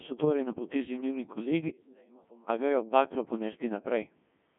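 It's speech run through a Codec 2 vocoder the whole way: buzzy, robotic sine-wave resynthesis, band-limited to roughly 150 Hz to 3.4 kHz, nothing above 3.5 kHz, which fits a 1.6 kbit/s mode.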